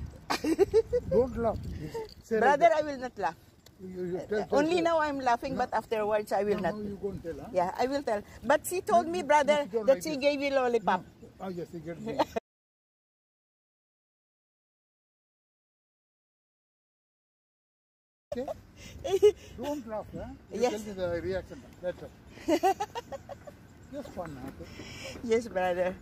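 Audio that cuts off abruptly at 12.39 s and drops into dead digital silence until 18.32 s, about 5.9 seconds with no room tone at all, then resumes mid-flow. That's an audio dropout to silence, likely from the input disconnecting or muting while recording carried on.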